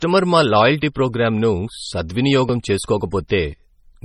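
Speech runs throughout with nothing above 15.2 kHz and the smeared, swirly artefacts of a heavily compressed MP3. This is likely low-bitrate audio saved at a high bitrate, possibly around 32 kbit/s re-encoded near 320 kbit/s. Unlike a clean low-pass filter, the damage persists under the cut-off.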